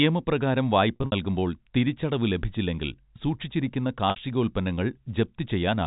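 At 0.96 s the speech hits packet loss with pitch repetition. About 120 ms goes missing in bursts across 160 ms, ending at 1.12 s. The longest gap is 60 ms. The receiver fills each hole by looping the last pitch period, so the speech briefly holds on a buzzy, frozen tone. At 4.10 s a single 60 ms gap does the same, ending at 4.16 s. These gap sizes fit lost 20 ms packets. The G.711 telephone band limit at 4 kHz can be heard throughout.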